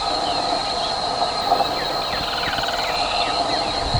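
From 1.41 to 2.96 s there is imaging from linear upsampling. A rise from 22 kHz to 44.1 kHz by straight-line interpolation leaves the top octave dulled and a mirrored copy of the spectrum, roughly 25 dB down, spanning 11 to 22 kHz, heard as a faint metallic shimmer on bright sound.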